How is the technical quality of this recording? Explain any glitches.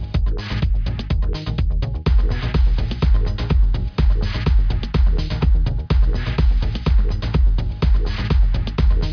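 No glitches or faults heard.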